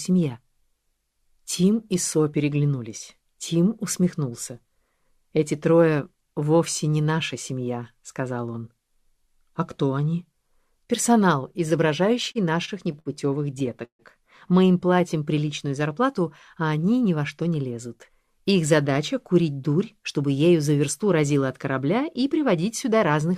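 From 12.31 to 13.08 s, packets arrived late and the jitter buffer kept emptying, causing repeated stalls (stutter): four brief stretches, the longest 63 ms, are filled in, so the sound drags and hiccups. At 13.85 to 14.02 s the audio halts as a call audio freeze. About 142 ms is filled, mostly silence, and then the sound resumes where it stopped, likely after packets were held up in transit. From 17.05 to 17.66 s, a jitter buffer speed-up trims about 50 ms of excess buffered audio in small pieces, so the sound runs at 108% speed and feels hurried without changing pitch.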